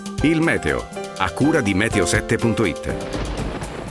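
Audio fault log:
No faults detected.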